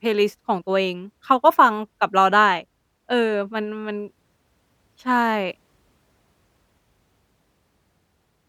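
No technical fault can be heard anywhere in the speech recording. There is no moment in it that needs a timestamp or a closer listen.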